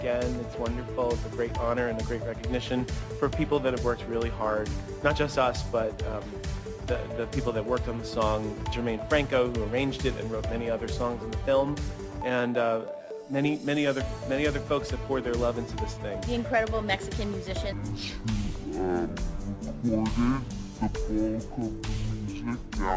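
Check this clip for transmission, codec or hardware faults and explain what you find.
One fault here, in the last stretch. From 17.72 s to the end, there's a wrong sample rate problem: the audio runs at half speed and drops a full octave (12 semitones), which fits 32 kHz material played back at 16 kHz with no conversion, so everything sounds slow and deep.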